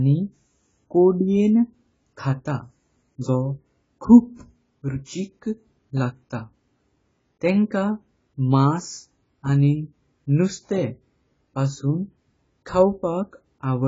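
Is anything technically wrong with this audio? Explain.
Yes. Throughout, the speech sounds dull and smeared, with nothing above 7.6 kHz. This is likely heavy AAC compression, pointing to a very low bitrate. Sibilants turn fizzy and warbly.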